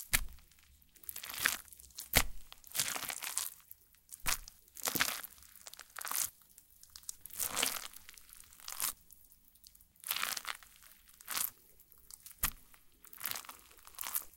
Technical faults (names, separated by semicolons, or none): none